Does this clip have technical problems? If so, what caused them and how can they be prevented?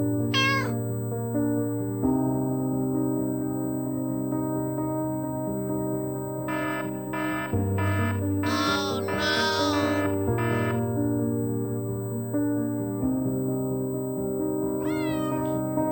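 Yes. USB whine runs throughout: a fixed tone at 8 kHz, strongest at 16 kHz and roughly 20 dB below the signal, from the bus's 125-microsecond microframe current draw leaking through power or ground. Prevent it with isolated or filtered USB power.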